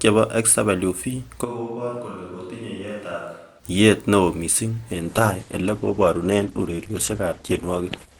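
A switch to a distant microphone occurs from 1.46 to 3.58 s: the speech turns abruptly roomy and hollow, thinner in the bass, about 10 dB quieter, with room noise rising to roughly 30 dB below the speech. This is likely the close microphone dropping out and a farther one taking over.

An adaptive stream at a lower bitrate takes over at 4.92 s, just after "neo missing", and lasts to the end. Treble vanishes above 12.2 kHz and codec artefacts thicken with no gap, which fits a sudden fall from roughly 64 kbit/s Opus to about 12 kbit/s.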